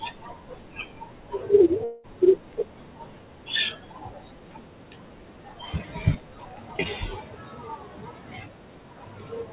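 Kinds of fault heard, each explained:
Long network dropout: from 1.84 to 2.07 s the speech gives way to a fading buzz and about 0.2 s is lost, likely from packets not arriving.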